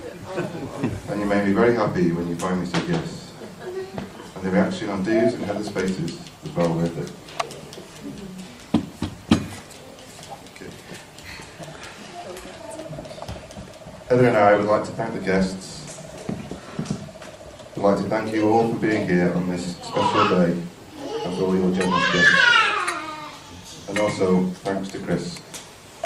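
No technical faults can be heard anywhere in the audio; the signal stays continuous and steady throughout.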